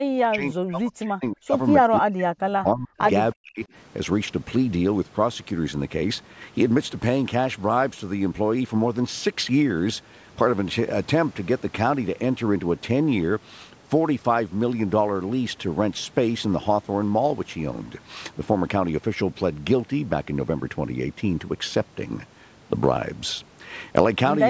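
Speech suppressed in double talk at 0.0–1.54, 1.82–2.37, 2.62–3.01 and 3.34–3.62 s: the speech sinks by about 40 dB in pieces, likely because an echo canceller mistook it for loudspeaker echo.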